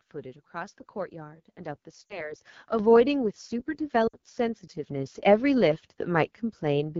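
Speech heard throughout with the AMR wideband (HD Voice) codec at a rasp and roughness that points to one of its lowest rates, near 8.85 kbit/s, unlike the clean sound of higher rates. Lost AMR speech frames at 2.06 to 2.34 s and 4.07 to 4.17 s, about 40 ms and 60 ms of missing audio, fade to near silence within two frames, because the decoder reuses the last good pitch and vocal tract settings with falling gain, and the speech returns briefly rough. At 2.79 s the microphone volume is stepped up by about 6 dB; voice and background jump together and stay louder, unlike a compressor's gradual swell.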